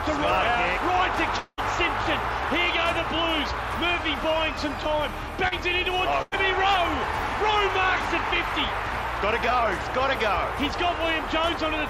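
At 1.39 s the sound breaks off and is replaced by a continuation of its last moment that decays as a buzzy, hissing tail for about 180 ms, with roughly 40 ms of near silence before the sound returns at 1.60 s. When it resumes, about 180 ms of material is gone. This is likely a long network dropout: no audio arrived for that stretch, so the receiver extended what it last had, let it fade, and then skipped ahead.

From 5.48 s to 5.53 s there is a brief smear, a wobble where the sound seems to stretch for an instant before blending back into place. This is short concealed packet loss. About 40 ms of audio missed the decoder's deadline, and the receiver filled roughly 32 ms of that hole by extrapolating the preceding sound, then crossfaded back into the real signal. Whatever was in the lost sliver does not reappear.

Between 6.22 s and 6.34 s the sound turns into a fading continuation of itself for about 96 ms, then resumes with a small jump forward. 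This is a burst of packet loss. Around 100 ms of consecutive audio was lost or arrived too late to play. The receiver kept repeating the last sound while progressively turning it down across the gap, so the material in between is simply absent.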